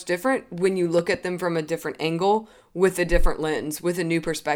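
At about 0.99 to 1.17 s, between "different when you" and "them from a different", two sharp loud pops rise above the speech, which keeps going underneath. This is a loud pop, likely a sudden voltage step or pulse from a plug, switch, static or driver glitch.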